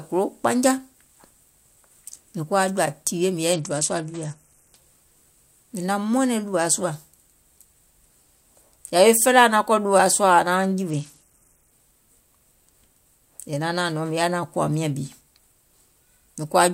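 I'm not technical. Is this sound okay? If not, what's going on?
No. The speech has two short Bluetooth SBC bit pool drops, from 3.5 to 4.8 seconds and from 10.9 to 11.7 seconds. During each one, the wireless link was struggling, and the phone sent the audio with far fewer bits to keep it playing. With so little data, the crisp high end of the voice goes dull and a gritty, sandy noise sits over it. Each time, it clears once the link recovers.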